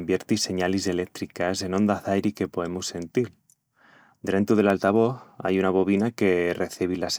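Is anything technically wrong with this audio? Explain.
Yes. At 4.70 s the speech contains a block of digital silence: about 0.35 ms of samples drop to silence and return with no fade. Because the gap is so brief, it is heard as a single tick rather than a hole, unlike a longer dropout, which leaves an audible gap.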